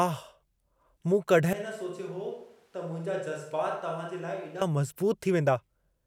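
From 1.53 to 4.61 s the close microphone likely drops out, forcing a switch to a distant microphone: speech turns abruptly roomy and thin, about 10 dB quieter, then snaps back.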